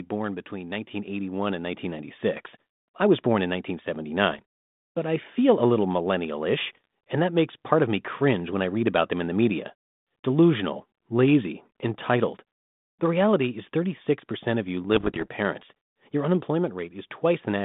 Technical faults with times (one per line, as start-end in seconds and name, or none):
0.49-2.16 automatic gain rising
4.30-4.42 bit errors on an ADPCM link
6.75-6.85 bit errors on an ADPCM link
14.95-15.28 bit errors on an ADPCM link